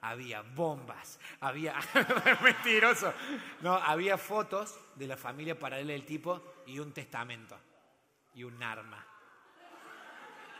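From 6.93 to 7.94 s the sound shows a Bluetooth SBC bit pool drop. The link appears to have starved the encoder of bits, which fits the bit pool halving from 28 to 14, near 108 kbps. Upper sub-bands lose detail, so treble dulls and gritty quantisation noise appears before quality recovers.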